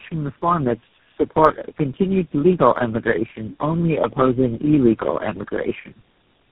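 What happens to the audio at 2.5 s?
At 2.5 s you're hearing tandem speech coding, and it runs through the whole clip. The roughness, muffling and warble point to about four low-rate speech coders in a row, each re-encoding the last one's damage. Nothing survives above 3.8 kHz.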